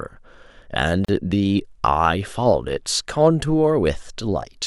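At 1.05 to 1.09 s the speech drops out for about 37 ms, a gap at a join of encoded pieces. Separately encoded segments were spliced untrimmed, leaving encoder delay and end padding. The waveform shows a flat hole with smeared edges; the spectrogram shows a full-band vertical blank.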